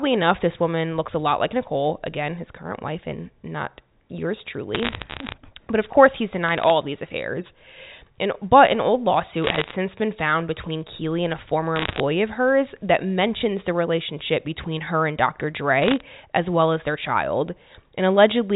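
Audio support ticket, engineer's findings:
Bit errors on a digital phone line: bursts of sharp ticks and crackle over intact speech at 4.75–5.34 s (after "wife and not yours"), 6.48–6.70 s, 9.42–9.74 s, 11.76–12.00 s (between "and a former" and "of hers that mentions"), and 15.82–16.01 s (before "as well as their"). Component: the G.711 mu-law 64 kbps line. Single flipped bits corrupt individual samples, and hits on sign or high bits give the loudest ticks. Error rate is up to about one percent. Unlike packet loss, there are no gaps or smeared concealment, and the speech underneath is unchanged.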